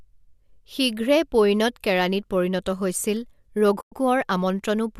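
Speech with a soft-edged dropout from 3.81 to 3.92 s, about 110 ms long. This is AAC frame loss with muting: a run of consecutive frames went missing and the decoder filled them with silence. The overlapping windows fade the sound down and back up instead of cutting it. The gap length fits roughly eleven short frames from the light low-delay AAC compression that is likely in use.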